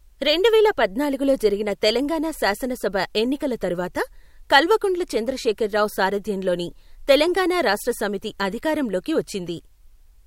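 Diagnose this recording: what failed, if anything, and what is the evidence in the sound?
Nothing failed here that I can hear: the speech runs along without any dropouts, glitches or other disturbances, and there's nothing in the sound pointing to a problem at any stage of the chain.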